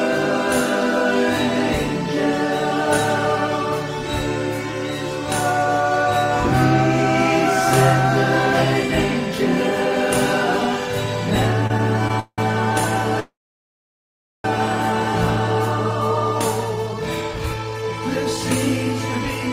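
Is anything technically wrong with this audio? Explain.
Yes. From 11.67 to 12.39 s there are repeated stalls (stutter). Four gaps, the longest 181 ms, are filled by continuing the last sound. The audio drags.

From 13.20 to 14.45 s there is a call audio freeze. Packets were likely held up. A fading tail is followed by about 1.1 s of silence, then the audio resumes.

From 16.70 to 18.38 s there is a jitter buffer speed-up. Short pitch-period pieces, roughly 0.3 s in total, are cut. The audio runs at 118% with unchanged pitch.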